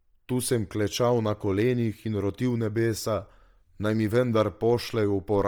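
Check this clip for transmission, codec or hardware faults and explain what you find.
The speech carries one fault, present from start to finish: heavy Bluetooth LC3 compression, likely from the transmission path. The upper spectrum sounds largely discarded and backfilled with synthetic noise, giving the voice a breathy, grainy texture. The damage fits 10 ms transform frames and a low bitrate around 32 kbps, where the encoder cannot afford real high-frequency detail. Nothing is present above 20.2 kHz, so the noise-filled region sits below that limit.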